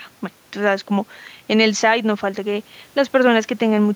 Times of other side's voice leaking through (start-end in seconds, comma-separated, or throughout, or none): none